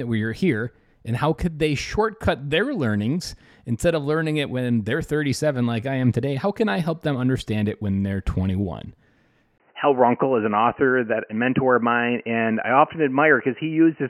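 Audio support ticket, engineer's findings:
Speech dull and band-limited from 9.58 s to end: nothing above 3 kHz, 20 ms gap, level shift, new noise floor. Likely input switched to a poorer device.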